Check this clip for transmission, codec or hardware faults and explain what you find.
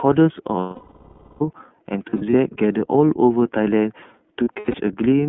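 Two faults are present: iLBC codec coding throughout, and lost iLBC frames at three points.

Throughout the speech, the sound is thin and boxed-in, slightly rough and synthetic, with nothing below 150 Hz or above 3.4 kHz. This is iLBC codec damage, and it is plainly audible. The narrowband codec models each frame's excitation on its own, and the texture fits the 30 ms mode at about 13.3 kbps. That coarse modelling adds the grainy, artificial edge on top of the telephone-band limits.

From 0.59 to 1.41 s, the speech gives way to a long, held buzzy vowel that fades. This is the most severe case of lost iLBC frames: about 810 ms of audio missing, which points to a run of roughly 27 consecutive 30 ms frames. The decoder repeats the last pitch cycle mixed with noise and fades it as the gap lengthens. Because each frame decodes independently, speech returns cleanly at 1.41 s.

From 2.10 to 2.34 s and from 4.44 to 4.75 s, the speech stutters with short smeared, buzzy patches rather than one long hold. 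These are lost iLBC frames scattered across each span. About 120 ms is missing in the first and 180 ms in the second, with the longest unbroken gaps lasting roughly 70 ms and 100 ms. Each gap is filled with brief pitch repetition, and clean frames in between keep the speech flickering back.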